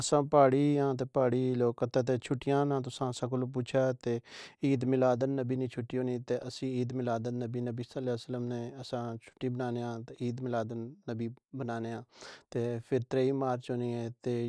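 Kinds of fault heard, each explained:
No faults can be heard in this speech recording; the signal runs without any audible technical break, distortion or interruption.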